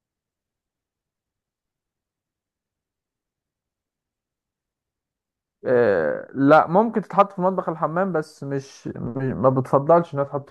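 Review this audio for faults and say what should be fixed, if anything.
No faults turn up anywhere in this speech recording. Nothing needs to be fixed.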